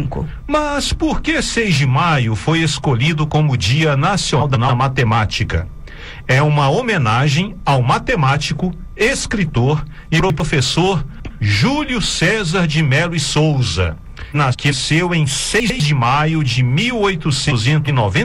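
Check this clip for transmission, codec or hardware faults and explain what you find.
There are two transmission faults, both reordering, with no audio lost.

Frames out of order at 4.40–4.70 s, 14.33–14.74 s and 17.50–17.89 s: adjacent blocks of about 139 ms and 186 ms are swapped, giving a garbled flutter. Waveform and spectrogram show abrupt discontinuities at three joins.

Chunks out of order at 10.2–10.4 s, 11.2–11.4 s and 15.6–15.8 s: one 100 ms chunk plays a slot late, causing a jumbled moment. Vertical spectrogram lines mark the hard splices.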